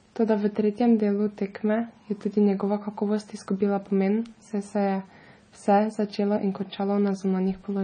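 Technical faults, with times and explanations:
Throughout, MP3 compression: watery, swirly speech, chirpy s sounds, nothing above 9.4 kHz; likely a bit-starved encoder, fitting roughly 24 kbps, zeroing weak frequency lines.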